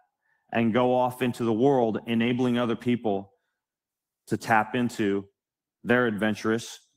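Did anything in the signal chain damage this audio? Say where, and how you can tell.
No, nothing in the signal chain has damaged this speech recording. None of the stages, from wiring and conversion through to storage and playback, leaves a mark anywhere in the audio.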